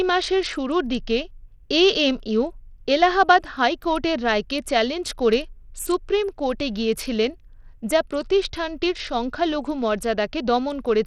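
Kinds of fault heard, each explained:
Bluetooth SBC compression: the speech carries plainly audible codec damage, with treble that thins out and flickers and a gritty grain on the sound, likely from SBC coding with a starved bit pool that leaves upper sub-bands short of bits, which fits a rate near 80 kbps.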